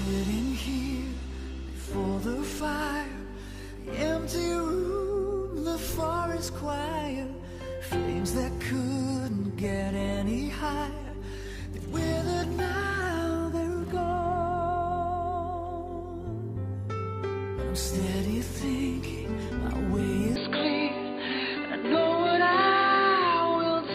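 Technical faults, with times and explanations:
20.36–23.94 s, input switched to a poorer device: the sound abruptly turns dull and boxy with no gap or level jump, and a faint new hiss appears. The spectrogram shows everything above 4.7 kHz cut off sharply while the waveform looks unchanged, likely because a narrower-band microphone took over.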